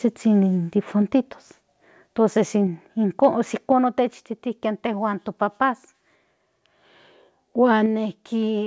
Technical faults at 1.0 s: microphone volume stepped down

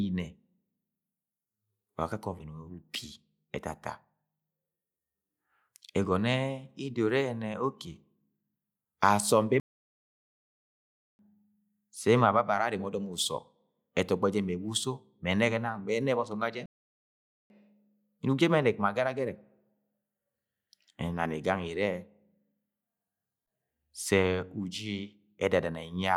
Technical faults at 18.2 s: none

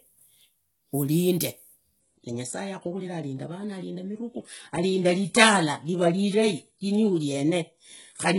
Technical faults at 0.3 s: none

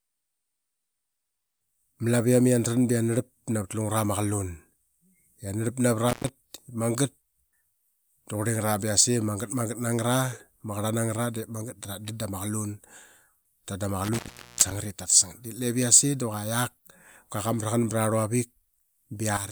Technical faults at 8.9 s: none

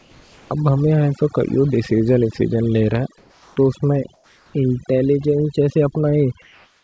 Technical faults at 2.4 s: overdone noise removal

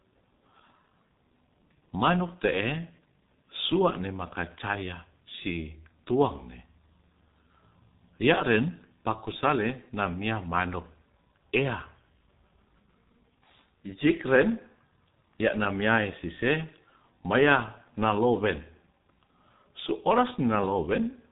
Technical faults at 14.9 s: G.723.1 codec

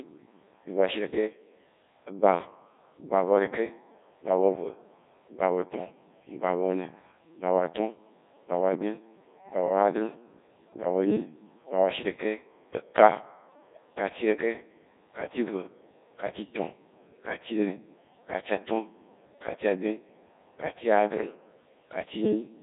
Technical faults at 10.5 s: Codec 2 vocoder

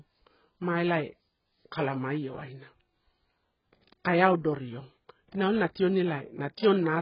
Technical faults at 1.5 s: AAC compression

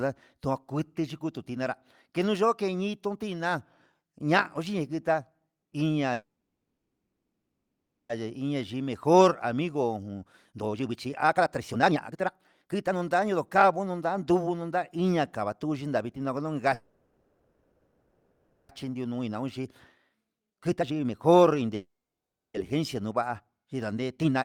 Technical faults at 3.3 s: none

